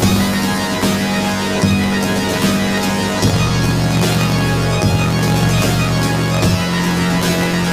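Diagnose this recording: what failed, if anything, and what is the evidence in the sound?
Planar audio read as interleaved, throughout the recording. This is a sample-format conversion fault. Each 21.77 ms block replays its left half and then its right half at double speed, an octave up. At these short blocks that produces a robotic buzz at 45.9 Hz rather than a clear octave shift.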